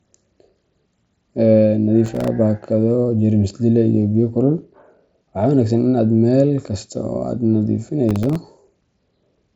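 Processor overload crackle appears from 2.06 to 2.28 s and again from 8.09 to 8.36 s. The processor repeatedly misses its deadlines, and each missed block drops out as a hard-edged silent gap. The sound tears into brief gritty crackle, consistent with roughly ten very short buffers failing across the stretch.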